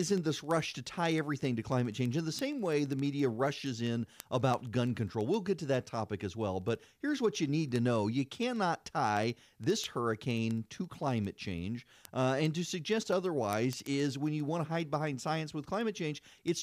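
From 0.11 to 16.62 s the speech carries word clock ticks. A receiver running on its own clock, a few hundred ppm adrift, drops or repeats one sample about every 70 ms. The sharp ticks appear as evenly spaced thin vertical lines on a spectrogram and brief glitches in the waveform.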